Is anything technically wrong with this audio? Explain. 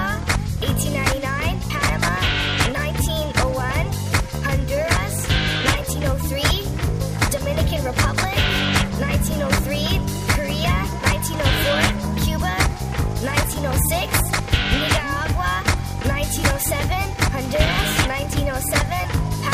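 Yes, there's one problem. From 17.45 to 17.83 s you get loose connector crackle: a worn or dirty contact is making and breaking as it shifts, chopping the signal on and off, so for about 0.38 s there's an irregular scratchy burst of crackle.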